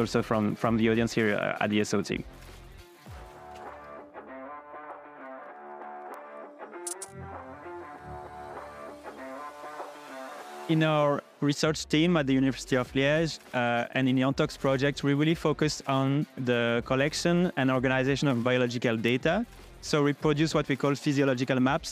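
At 6.14 s and again at 19.08 s there is a bit error spike, where a flipped bit briefly forces the sample value off by a power of two. Each is a sharp, isolated tick, the second louder at about -18 dBFS versus about -30 dBFS. On the waveform each appears as a one-sample or few-sample needle, and on the spectrogram as a thin full-band vertical line.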